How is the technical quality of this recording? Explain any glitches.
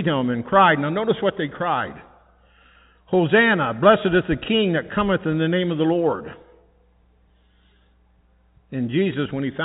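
No glitches: the speech runs over G.711 telephone coding, so it is band-limited below 4 kHz and carries only the faint level-tracking hiss of that format, with nothing audible going wrong.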